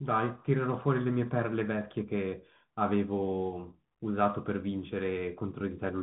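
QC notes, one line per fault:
throughout, Bluetooth CVSD headset codec: the speech sounds boxed into a narrow phone band with nothing above 4 kHz, s sounds turn scratchy and a grainy hiss runs underneath, because a one-bit up/down delta coder, consistent with 64 kbps CVSD, can't keep pace with fast, loud high-frequency swings.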